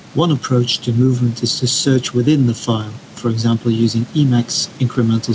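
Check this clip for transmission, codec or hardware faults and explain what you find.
One hardware-side fault runs through the whole recording: gain pumping, heard across the speech from start to finish.

The low room noise sits well below the speech, while the gain rises in the pauses and drops as soon as the talker gets loud again, with a swing of roughly 5 dB. The likely cause is microphone gain set far too high, so that a fast limiter or compressor has to clamp down on each loud syllable and then release in the gaps. The effect is a squashed, breathing sound, with loud and quiet passages pressed close together in level. A noise gate would differ: it would cut the background abruptly to near silence between phrases instead of letting it rise smoothly. A codec fault would bring in warbly or metallic texture, not this steady level-following rise and fall. The audio also stops at 8 kHz, which fits the normal bandwidth of a wideband call codec such as G.722.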